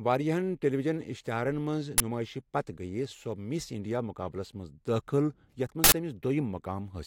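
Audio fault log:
1.98–2.00 s and 5.84–5.92 s, uninitialised buffer: just after "ٹیلی وجن اِشتِہارن منٛز", then again later, a 20 ms block becomes a loud crack and an 80 ms block a burst of digital noise because playback read memory no audio had been written to, outputting leftover values as samples.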